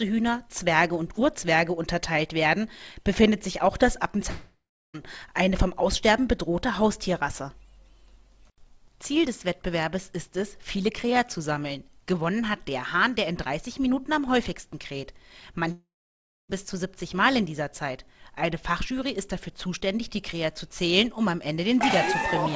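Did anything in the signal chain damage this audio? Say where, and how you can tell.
Yes. At 4.30 to 4.96 s and 15.72 to 16.51 s, the sound smears into a fading buzz, then silence. This is likely a long network dropout, where the receiver concealed missing packets.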